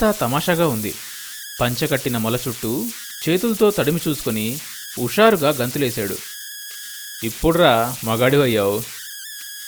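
Converter idle tones run through the whole recording. A whistle sits near 1.5 kHz and is clearest in the pauses between phrases. Under quieter speech it turns into a grainy hiss. The error is strong, at about 13 dB below the signal. The cause is an undithered delta-sigma converter. With little input, its modulator locks into repeating bit patterns. Those patterns produce steady tones, and their pitch follows the input's offset.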